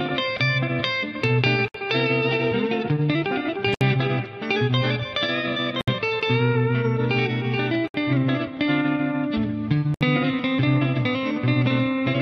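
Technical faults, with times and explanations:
1.68–1.74, 3.74–3.81, 5.81–5.88, 7.88–7.94 and 9.94–10.01 s: gap at a join of encoded pieces. Sound drops out for about 62 to 67 ms, about every 2 s, then resumes where it stopped. Separately encoded pieces keep their leading delay and end padding, leaving silences with smeared edges.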